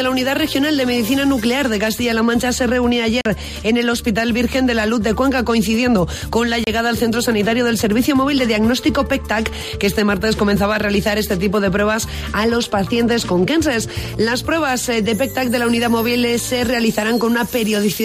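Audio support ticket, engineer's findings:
Bluetooth dropout at 3.21–3.26 s and 6.64–6.67 s. Holes of silence, about 44 ms and 29 ms long; audio resumes further along, as if it kept playing through the gap. Likely a wireless link failing to deliver packets to the headphones in time, so the receiver discards them and outputs nothing. Gap lengths fit roughly three and two lost packets respectively.

GSM signalling bursts at 12.49–14.15 s. Galloping dit-dit-dit of short 217 Hz buzzes, sitting about 15 dB below the programme. A nearby 2G phone exchanging signalling traffic with its network; the audio circuitry rectifies the radio bursts and turns their envelope into audible interference. Increase distance between phone and cabling or improve shielding and RF filtering on inputs.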